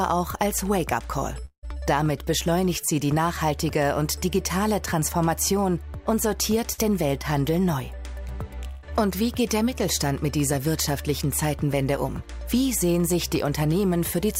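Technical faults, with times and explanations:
1.45 to 1.65 s, long network dropout: the sound carries on as a fading buzz or hiss that ends in about 100 ms of silence, about 170 ms in all, before resuming further on, with about 180 ms absent. This is likely a stall in delivery that the receiver concealed by extending the last sound.
6.73 to 6.80 s and 8.68 to 8.85 s, burst of packet loss: in each, the receiver extends the last sound as a decaying buzz or hiss, for about 53 ms and then about 148 ms, because consecutive packets were lost or arrived late. Audio then resumes with about 60 ms and 140 ms missing.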